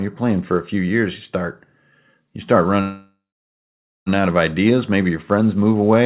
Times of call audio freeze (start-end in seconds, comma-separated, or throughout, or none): 2.81-4.09